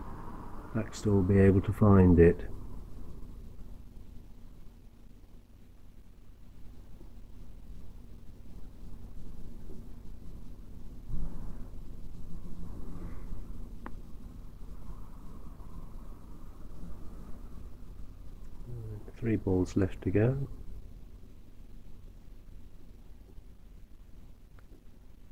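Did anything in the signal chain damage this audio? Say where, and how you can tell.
Yes. From 6.14 to 8.99 s, crude rate conversion at the sample-rate stage: samples were repeated without filtering, which fits 44.1 kHz to 48 kHz. This leaves a faint inharmonic fizz, roughly 45 dB down, that follows loud, bright passages, unlike steady codec swirl.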